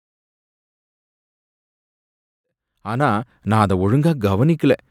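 Nothing stood out on listening to this speech clip; the level rises smoothly from around 2.5 s to 3.64 s, the way an editor would bring it in.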